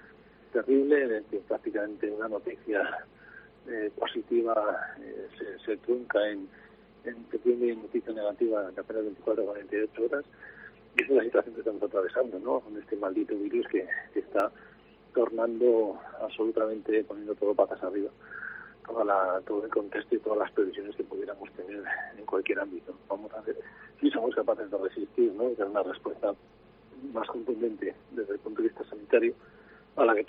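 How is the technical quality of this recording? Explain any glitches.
There is one glitch, a single jump at 14.40 s. It is most likely a dropped buffer (overrun): the audio wasn't read before the hardware overwrote it, so about 1.5 ms vanished and the sound jumps ahead. A spectrogram shows a thin vertical broadband line, and the waveform a sudden discontinuity.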